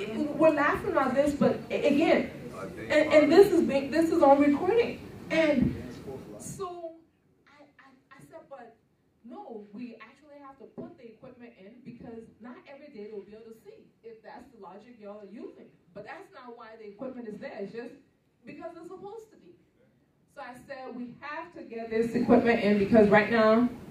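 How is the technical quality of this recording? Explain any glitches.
One glitch stands out, near the end. From 21.66 to 22.22 s there is zipper noise: a level change of around 25 dB is applied in coarse, unsmoothed steps, about a hundred a second, each leaving a small click. Together they form a rapid ticking that rides on the sound. Unlike random crackle, the ticking happens only while the level is moving and stops once the change is complete.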